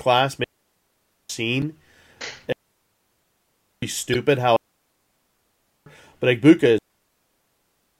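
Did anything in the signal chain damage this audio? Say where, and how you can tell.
Yes. Digital wireless dropouts sit at the radio link stage, at 0.44 to 1.30 s, 2.52 to 3.82 s, 4.56 to 5.86 s, and from 6.78 s to the end of the clip. Each is a clean hole of near silence lasting between about 0.86 and 1.3 s, entered and left with a very short fade and no noise burst on either side. That is the receiver muting itself when too much of the digital link's data fails to arrive.

Damaged data in a compressed stream shows up at the codec stage as two brief blips: a very short one at 1.62 s and a longer one of about 34 ms from 4.12 to 4.16 s. These glitches come from corrupted bytes in the encoded stream. The decoder misreads the bad frames, loses sync, and skips ahead to the next valid frame header, leaving a short artefact where the stream resumes.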